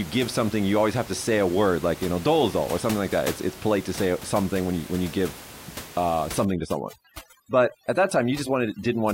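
Overdone noise removal sets in at 6.45 s, right after "when you give uh", and runs to the end of the clip at 9.14 s. The room noise, sitting about 16 dB below the speech, is what the noise reduction tries to remove, but set this hard it drives each frequency band near that noise level down or out entirely. The background drops away and breaks up into twinkling specks, and softer parts of the speech go too.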